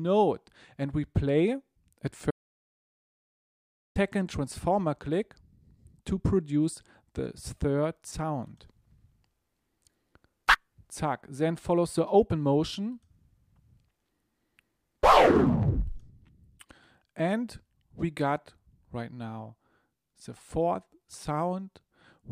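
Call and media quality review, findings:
Audio dropout to silence, 2.31 to 3.96 s: sound cuts out mid-flow, roughly 1.6 s of silence, no room tone, then resumes abruptly. Likely input loss upstream, device disconnect or mute, with the encoder still writing silence. Content there is unrecoverable.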